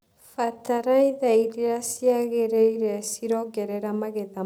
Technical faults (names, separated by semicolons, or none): time-stretched section